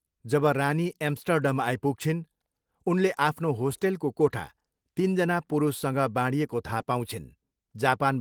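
No technical faults can be heard anywhere in the clip.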